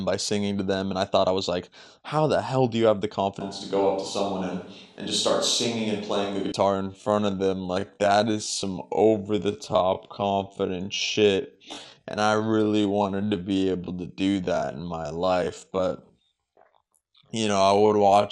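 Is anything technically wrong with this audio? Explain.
Yes. The whole clip has a dull, gurgling, granular quality. It likely comes from MP2 compression, which at a low rate near 80 kbps quantises sub-bands coarsely and switches upper ones off.

From 3.41 to 6.52 s the speech turns roomy and hollow, with thinner bass. Faint room noise sits well below it, and the level barely shifts. This points to a switch to a distant microphone.

From 6.74 s to the end, the pace drops abruptly to about 0.58 speed while pitch holds. The speech drags, consistent with a time-stretched section that repeats short pieces.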